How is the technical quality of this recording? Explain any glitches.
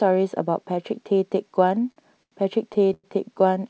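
The speech comes through a call connection whose audio stops at 8 kHz, which fits a wideband codec such as G.722 at 64 kbps. Two timing faults stand out.

From 1.75 to 2.34 s there are repeated stalls (stutter). Packets arrived late, so the jitter buffer emptied six times. The receiver stretched the last sound across the gaps, up to 87 ms each, and the speech drags without losing anything.

From 2.94 to 3.06 s there is a call audio freeze, likely from packets being held up in transit. The last sound is extended for about 100 ms and fades into roughly 20 ms of silence before the speech resumes.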